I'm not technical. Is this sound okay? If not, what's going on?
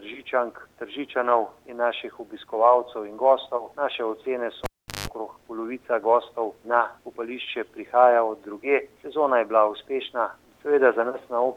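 No. At 4.64 seconds a live cable is pulled out and plugged back in. You hear a pop, then the sound drops to near silence for about 0.39 seconds. As the plug goes back in, only its tip touches at first, so for about 0.17 seconds it picks up a low 50 Hz hum from the mains electricity. Another pop follows at 5.08 seconds as the sound comes back.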